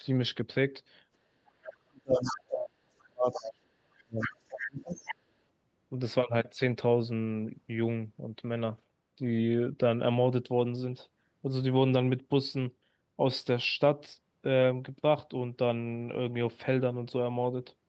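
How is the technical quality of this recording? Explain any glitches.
The recording has two related faults, both packed into the opening seconds. The audio tops out around 8 kHz, as expected on a call path.

Speech suppressed in double talk, 1.27 to 4.99 s: the talker's level repeatedly sinks, by as much as about 40 dB at its deepest, for roughly three seconds in total. This is likely an echo canceller that, faced with both sides talking at once, could not tell the local voice from loudspeaker echo and turned everything down. It differs from a network dropout because the audio dips and recovers in uneven pieces rather than breaking off cleanly.

Other side's voice leaking through, at 2.22 to 2.41, 3.32 to 3.53, 4.20 to 4.36, 4.52 to 4.61 and 4.94 to 5.15 s: brief scraps of a second voice surface. They sit mostly about 10 dB below the talker, about 5 dB below at 4.20 s and about 15 dB below at 4.52 s. 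The likely cause is residual echo, where the far end, played on a loudspeaker, reached the microphone and was not fully cancelled. This fault adds a voice rather than removing one, which sets it apart from the suppression it overlaps.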